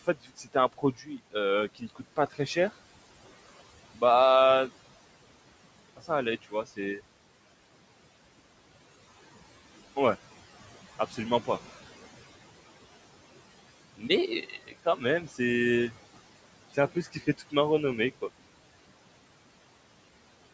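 A noise suppressor in the call path runs across the whole of this speech recording, pulling the room noise down by about 17 dB, so the background sinks in pauses and swells back under speech. The same noise suppressor also cuts speech, mistaking parts of it for noise and dropping them by up to about 18 dB at 0.04–1.35, 1.75–2.56, 6.42–6.79, 10.99–11.48, 14.42–15.39 and 16.74–17.53 s. Within each span, between about a tenth and half a second of syllables sound swallowed or faint. The room noise itself, roughly 19 dB under the speech, and the call microphone's band limit near 8 kHz are part of the normal capture.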